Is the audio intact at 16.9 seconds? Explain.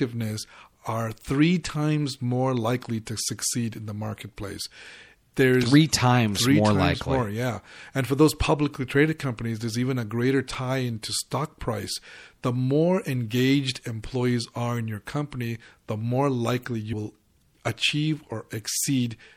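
No. Compressed frames are skipped at 16.92 s, between "company the more likely" and "will achieve". The decoder never plays about two blocks of compressed audio, each about 26 ms long, so roughly 50 ms of sound is lost and playback jumps ahead. The frames overlap their neighbours, so the join is a brief smeared blip rather than a sharp click.

At that same moment, as throughout the clip, the sound has a plainly watery, swirly quality. Sibilants sound metallic, and the onsets of sounds are smeared. This is the signature of MP3 compression, likely at a low rate around 64 kbps. At that rate the encoder runs short of bits and lets weak spectral detail flicker on and off from frame to frame.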